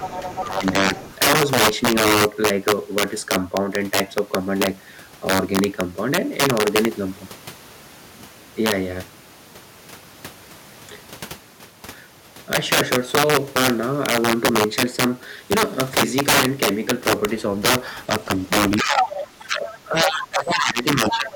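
Integer overflow runs through the whole recording. Loud peaks push about 12 dB past the top of the integer range, and a small share of samples, roughly two percent, wrap to the opposite sign instead of being held at the limit. Each of those peaks flips across the full range, so loud speech is split by violent cracks that are far harsher and sharper than ordinary clipping.

Other side's voice leaking through opens the clip from 0.0 to 0.43 s, a second voice about 10 dB under the talker. It returns more faintly, about 20 dB down, from 0.94 to 1.15 s. Near the end it appears from 18.98 to 19.22 s at roughly the same level as the talker, faintly again from 19.69 to 19.79 s, and from 21.1 s to the end at about 5 dB below. The likely cause is the far side playing from a loudspeaker and reaching the microphone, with the echo canceller failing to remove it all.

Speech suppressed in double talk first hits from 0.43 to 0.94 s, with dips of up to about 10 dB over roughly 0.3 s. 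It returns from 18.77 s to the end, more deeply, up to about 15 dB, across roughly 2 s. In both stretches the talker's voice sinks. It likely happens because both sides speak at once, and the echo canceller, unable to separate its own talker from the echo, turns everything down.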